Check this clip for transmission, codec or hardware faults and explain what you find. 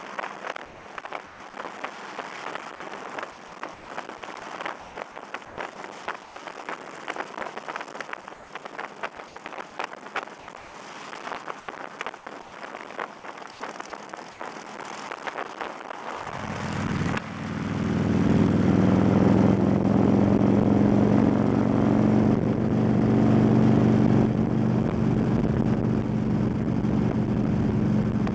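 Two faults are audible: the background is repeatedly replaced by synthetic noise, and one brief stretch of sound is cut off. The band stops at 8 kHz, which fits a G.722 call path.

Comfort noise in place of the background is heard at 0.66–1.40, 3.74–3.88, 4.80–6.36, 8.34–9.36, 10.40–10.74, 11.60–12.52 and 13.52–14.40 s. The likely cause is discontinuous transmission: the sender stopped sending during pauses, and the receiver generated shaped noise to fill them. The real background turns into a smooth, featureless hiss. At 3.74 s it drops by about 4 dB. On a spectrogram the textured floor becomes a uniform wash, and the waveform envelope flattens.

Sound dropped by the voice detector occurs at 9.16–9.18 s, inside the comfort-noise stretch. The detector likely treated a bit of sound as background, so about 10 ms is lost and replaced with noise. It sounds like a tiny clipped edge. On a spectrogram it shows as a thin gap where the sound's energy stops against the flat noise.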